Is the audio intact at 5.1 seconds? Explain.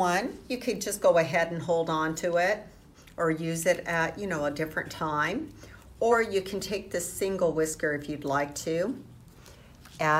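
Yes, the audio is intact at 5.1 seconds, with no dropout, click, distortion or other fault at that moment.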